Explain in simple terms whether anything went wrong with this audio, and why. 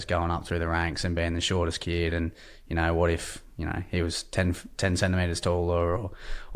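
Nothing went wrong; this speech recording sounds fine.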